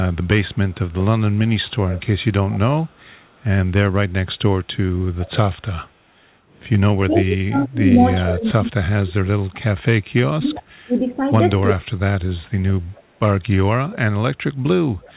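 Echo leak at 0.13–0.92 s, faint at roughly 40 dB below the speech, then stronger at 1.68–3.44 s and 5.19–5.9 s, around 20 dB down. A copy of the speech returns about 0.4 s late, likely from a loudspeaker whose echo canceller let part of its own pickup through.

Speech suppressed in double talk from 7.09 to 11.87 s: the talker dips in pieces, around 3 s in total, by up to roughly 30 dB. This is likely an echo canceller mistaking overlapping talk for echo and turning both down. Inside that stretch, another brief echo leak at 10.56 s sits around 20 dB down, again about 0.4 s behind.

Echo leak returns at 12.93 s and 14.89–15.13 s, around 30 dB down with the same 0.4 s lag. The whole clip is band-limited to 4 kHz, which fits a G.711 call path.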